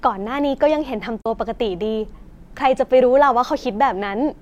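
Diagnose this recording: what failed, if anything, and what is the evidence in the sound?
The failure is at the codec stage: AAC frame loss with muting around 1.22 to 1.26 s, a roughly 43 ms gap consistent with one lost frame. The decoder zeroed its spectrum, and overlapping windows taper the sound out and back in. A spectrogram shows a soft-edged blank vertical band; the waveform shows an envelope dip.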